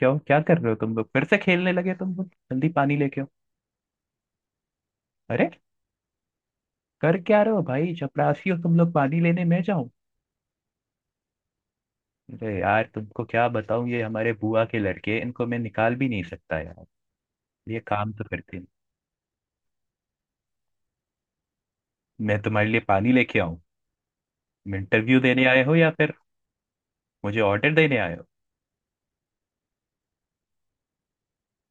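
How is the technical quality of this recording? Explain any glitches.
The recording has one audible glitch, confined to the first second.

Channel delay (comb filtering), 0.0 to 1.0 s: one channel runs roughly a tenth of a millisecond late, and summing to mono carves notches from around 5 kHz, leaving the speech hollow and dulled.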